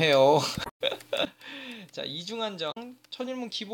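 Around 0.62 to 0.82 s there's a glitch where the compressed stream carries damaged data. The decoder can't make sense of those frames, loses sync and hunts for the next good header. At 1.25 s there's a sudden gain jump: the sound and its background noise both drop by about 12 dB in one step and stay down to the end, most likely a level change applied instantly with no ramp. Then at 2.68 to 2.77 s another short blip of damaged stream data comes through, the same decoder stumble but briefer.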